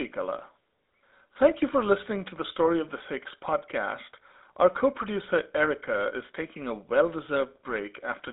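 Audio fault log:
Throughout: GSM full-rate codec. The whole clip sits in a telephone band, roughly 200 Hz to 3.7 kHz, with nothing above 3.8 kHz. The speech has a plainly buzzy, gravelly edge because the codec rebuilds the voice from a coarse pulse train through a vocal-tract filter, which fits a 13 kbps GSM full-rate stream.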